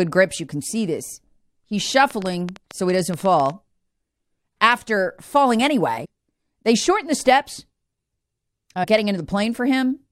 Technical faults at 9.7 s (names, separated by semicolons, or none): none